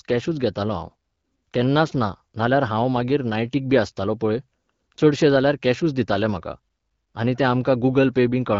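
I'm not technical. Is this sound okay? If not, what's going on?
Yes, this speech recording sounds fine, with nothing going wrong in it, and it has the familiar light touch of an HD Voice phone call running at a comfortable setting.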